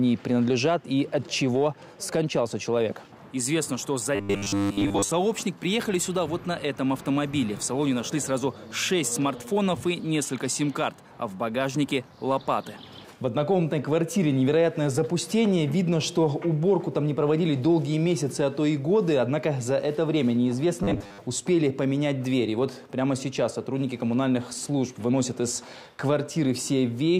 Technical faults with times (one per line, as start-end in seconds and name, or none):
4.15-5.11 robotic sound from repeated short buffers
20.83-21.20 robotic sound from repeated short buffers